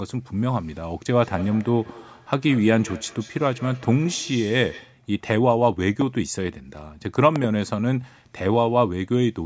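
From 1.19 to 5.03 s the speech comes back as a thin, ringing repeat roughly every 200 ms, about 20 dB below the speech. This is feedback echo between two devices: one device replays what the other's microphone sent, and that microphone captures it again, beyond either device's echo canceller. A loud pop lands at 6.01 to 6.04 s, and a double pop follows between 7.36 and 7.46 s. Both are sharp pops roughly 10 dB above the speech, which carries on underneath. They are likely a sudden voltage step from a plug, switch, static discharge or driver glitch. The call's microphone processing caps the audio at 8 kHz.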